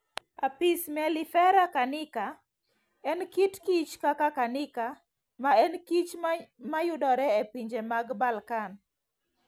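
No technical faults can be heard anywhere in the recording.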